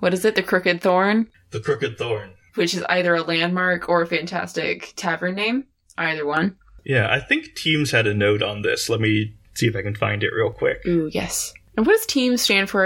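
From 1.3 s to 6.37 s, just after "crooked thorn", the speech shows channel delay (comb filtering). One channel lags by roughly 10 ms before the mono sum, cutting evenly spaced notches from about 40 Hz upward, so the sound turns hollow and phasey.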